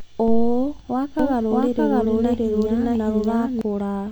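A doubled audio track runs from 1.19 s to 3.61 s. A second full-band copy of the speech sits around 0.7 s behind the original and at roughly the same level, so each phrase is heard again a beat later, overlapping whatever follows. The copy has no decay or room colour, and it cuts in and out abruptly at those times. The likely cause is a second capture path running late, or an edit holding two misaligned copies.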